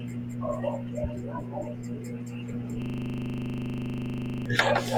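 At 2.82 s the speech locks into a system hang loop that lasts until 4.46 s. The computer or its audio driver stopped supplying new sound. The hardware kept replaying whatever sat in its ring buffer. One 40 ms slice repeats exactly, about forty times. That loop length fits a ring buffer of roughly 40 ms. Repeating at 25 Hz, the slice fuses into a steady, coarse buzz in place of the speech.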